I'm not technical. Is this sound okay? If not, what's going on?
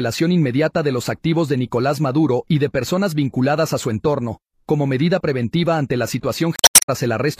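No. Near the end, from about 6.55 to 6.88 seconds, there is damaged data in a compressed stream. Part of the stored audio file was corrupted, so the player couldn't read that stretch correctly. It lost its place and had to hunt for the next readable chunk. For roughly a third of a second the sound breaks up instead of playing cleanly, heard as a chirp, squawk, click or short gap.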